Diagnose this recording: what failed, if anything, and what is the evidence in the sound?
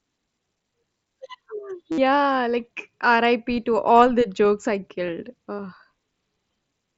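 The Bluetooth link dropped packets: concealed Bluetooth headset packet loss. From 1.92 to 1.98 s the receiver loops recent waveform across a 60 ms gap, giving a buzzy held tone and a small warble on recovery. A brief two-frame loss at 5.07 s, after "all the jokes I", lasts 15 ms.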